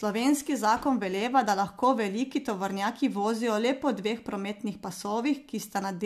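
No technical faults can be heard anywhere here.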